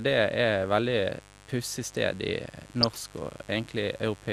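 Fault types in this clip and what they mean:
Mains buzz: A steady, raspy buzz runs under the speech for the whole clip. Sharp switching spikes from the 50 Hz mains supply leak into the signal, and their harmonics climb high into the kilohertz range. The buzz sits roughly 25 dB below the speech.
MP2 compression: The speech sounds dull and carries a gurgling, granular roughness throughout. Upper frequency bands seem to drop in and out, and what remains sounds coarse. This likely comes from MPEG Layer II coding at a low bitrate, around 80 kbps.
DAB burbling: From 2.81 to 3.05 s a burst of burbling breaks over the speech. Uncorrected bit errors throw individual sub-bands briefly out of level. The short span suggests 13 damaged frames from a bit error rate of about 0.4%.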